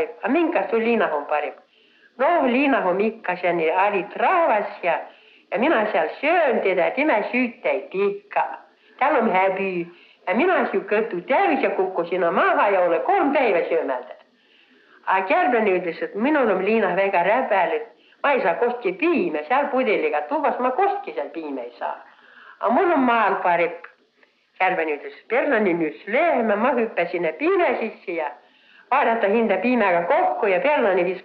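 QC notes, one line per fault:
25.05–26.51 s, drift correction step: playback slows by 5.42% and pitch drops about 96.5 cents, roughly a semitone, for about 1.5 s, then snaps back. This is likely clock-matching software changing the rate in one step to rebalance its buffer.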